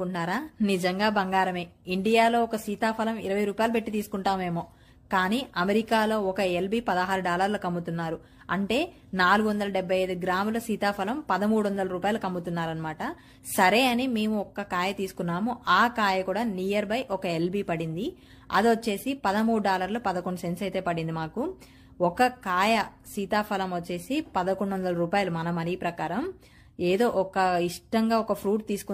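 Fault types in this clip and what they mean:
Nothing stood out on listening to this clip.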